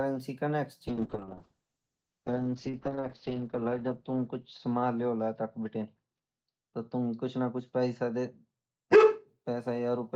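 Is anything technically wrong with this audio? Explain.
Yes. From 0.88 s to 9.33 s there is a call bitrate drop. The encoder was pushed to far fewer bits, which fits a fall from 32 kbps to 7 kbps, so the audio turns rough and watery, and the top end narrows from 20 kHz to 8 kHz, deepest for about 2.3 s. Unlike a simple low-pass filter, the coarse, smeared coding texture comes along with the muffling.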